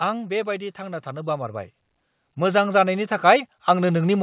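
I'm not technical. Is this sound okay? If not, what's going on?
No. Automatic gain rising happens from 0.75 to 1.8 s and again from 2.36 s to the end. The call's volume control judged the speech too quiet and gradually turned it up, so voice and background swell together. The muffled, telephone-like tone is simply how this call connection sounds, with nothing above 4 kHz getting through.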